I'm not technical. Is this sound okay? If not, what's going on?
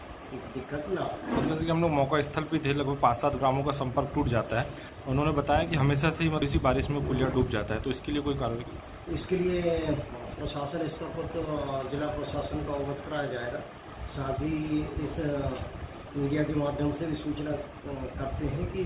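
No, not quite. At 6.42 s there's a skip ahead: about half a second of sound just vanishes and playback jumps straight to what came next.

From 8.29 to 10.14 s there's a jitter buffer speed-up: the system trims tiny slivers to catch up, so that stretch runs about 10% faster without changing pitch.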